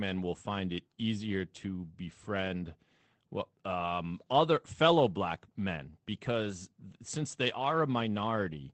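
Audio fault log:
6.49 s, lost packet rebuilt from error correction: a brief stretch turns rougher and noisier, with no dropout or silence, which fits a single 20 ms packet replaced by its low-bitrate backup copy. Unlike plain loss concealment, nothing is guessed or smeared, so no gap or buzzy fill is heard.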